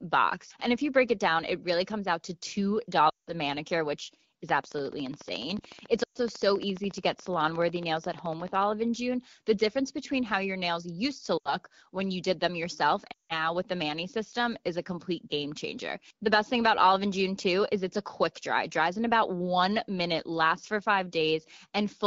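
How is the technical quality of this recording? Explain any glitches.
It's a wideband phone call with audible damage: four short dropouts and a few seconds of steady ticking laid over the speech. The wideband coding itself sounds clean, with light codec character, which fits the 12.65 kbit/s mode.

Lost AMR speech frames hit at 3.10–3.33 s, 6.03–6.17 s, 11.38–11.55 s and 13.11–13.34 s. Corrupted frames forced the decoder to guess from the last good one, and in wideband that fades to near silence quickly, so you get gaps of about 180, 120, 80 and 180 ms before the speech comes back.

A train of clicks runs from 4.49 to 8.63 s: around 50 clicks at a regular 14 per second, peaking about 5 dB above the speech and ticking through the pauses too. That steady pulse most likely comes from electrical interference or a bad connection or power supply.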